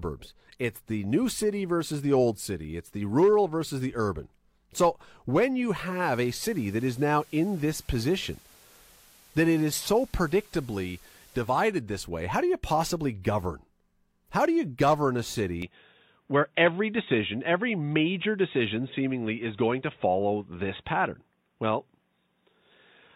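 At 5.86 s a steady hiss rises under the speech over roughly 187 ms, with no jump in loudness. The hiss sits around 30 dB below the speech and lasts until 11.54 s, when it fades out again. This is digital radio blending to analogue: the receiver lost the digital stream and cross-faded to the FM broadcast of the same station, whose noise floor is audible, then returned to the cleaner digital signal.

From 15.62 s to the end, the speech abruptly turns duller and narrower. There is no gap at the change and no shift in level. A faint new background noise appears, roughly 50 dB below the speech. This is most likely an input switched to a poorer device mid-recording, such as a headset's call profile or a lesser microphone, whose limited bandwidth cuts off the upper treble and brings its own noise.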